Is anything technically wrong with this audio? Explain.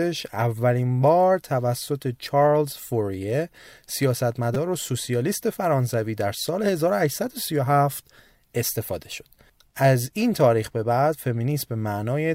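Yes. At 4.55 s there is a repeated buffer: new audio arrived late, so the device replayed its last 5 ms block three more times. Four hard-joined copies of the same tiny slice come out as a brief buzzy click in the speech, with no audio apparently lost.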